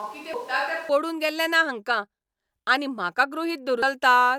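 Until 0.89 s the speech sounds hollow, roomy and about 10 dB quieter, likely a switch to a distant microphone. It shows as a smaller waveform, weaker bass and a raised noise floor. At 0.34 s and again at 3.82 s, damaged data in the compressed stream throws the decoder out of sync, producing brief glitches that appear as thin vertical smears.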